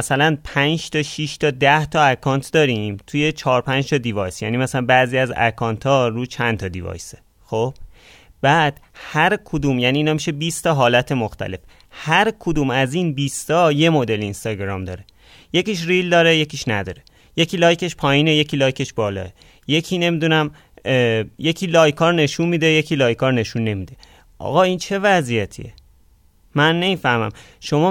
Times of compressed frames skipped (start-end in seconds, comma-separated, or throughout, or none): none